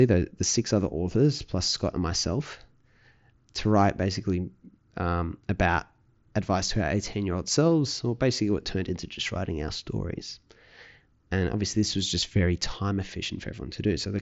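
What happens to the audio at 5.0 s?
Nothing goes wrong at 5.0 s; the speech is intact there, carried through the Bluetooth mSBC headset link as normal.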